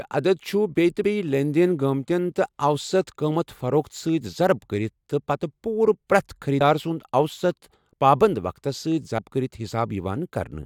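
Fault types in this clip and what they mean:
Compressed frames skipped: whole blocks of the coded audio never reach the output, because they were either absent from the stream or rejected by the decoder as corrupt, so the speech jumps forward by a few frames at a time. Here the frame length is 23.2 ms. There are four jumps, at 1.02, 6.60, 7.92 and 9.18 s. Each drops roughly three frames, about 70 ms, except the one at 7.92 s, which loses about 100 ms.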